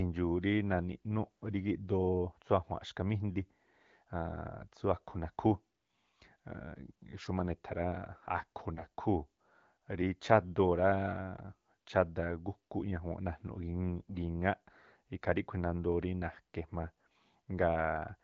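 AMR bit errors strike at 8.74 to 8.85 s and again at 14.09 to 14.16 s. With several percent of the weakly protected bits flipped over a few frames, misplaced excitation pulses and skewed gain and spectral values briefly make the wideband speech scratchy and gargly, while pitch and level hold.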